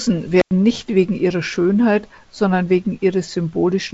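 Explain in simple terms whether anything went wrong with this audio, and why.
A cable or plug connection briefly came loose, an intermittent contact, between 0.40 and 0.51 s. For about a tenth of a second the speech cuts out, with a crackle as the contact breaks and reconnects, leaving only faint hiss in the gap.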